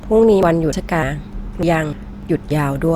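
A speech recording with audio missing between chunks: abrupt skips at 0.43, 0.73, 1.03, 1.33, 1.63, 1.93 and 2.23 s, each dropping around a fifth of a second and splicing the edges together. This is likely a recorder losing audio while switching between 0.5 s chunks.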